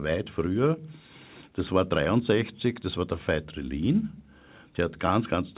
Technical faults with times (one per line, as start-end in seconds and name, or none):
none